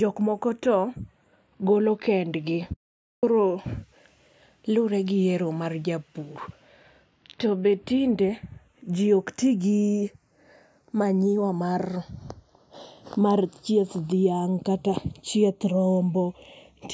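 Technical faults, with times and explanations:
Throughout, channels drifting apart: the two channels run on clocks that disagree by roughly 30 ppm, so their offset creeps to a fraction of a millisecond by the end. Summed to mono this gives slow flanging, seen on a spectrogram as comb notches gliding gradually across frequency.
2.73 to 3.23 s, audio dropout to silence: the speech cuts off for about 0.5 s and resumes abruptly. The gap is silent with no room tone, likely from a lost input while recording continued. It shows as a flat line in the waveform and a blank spectrogram column.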